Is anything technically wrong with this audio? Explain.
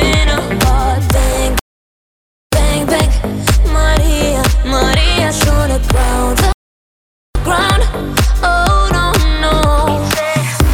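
Yes, there are two rebuffering stalls, at 1.59 to 2.53 s and 6.52 to 7.35 s. The player ran dry of downloaded audio and simply waited, so the sound drops to silence for about 0.93 s and then 0.83 s, and picks up exactly where it left off. Nothing is missing; the gaps just add time.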